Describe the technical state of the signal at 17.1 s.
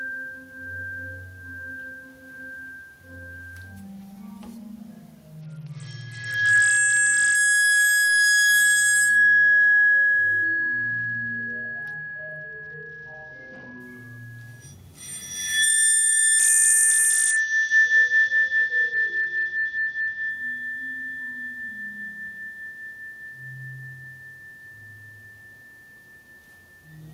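At 17.1 s the audio sits inside a Bluetooth SBC bit pool drop running from 16.39 to 20.30 s. The link starved the encoder, so the top sub-bands lose their bits and the rest are quantised coarsely. The treble goes dull and a gritty noise appears, which fits a bit pool cut from 28 to 8 and a rate near 72 kbps. Unlike a steady low-pass filter, it lifts once the rate recovers.

Gain pumping runs through the whole clip, including this moment. The gain swings by roughly 15 dB, pulled down on each loud sound, which squashes the dynamics. This is likely a fast limiter acting on excessive input gain. It differs from a noise gate because the floor rises in the gaps instead of being cut.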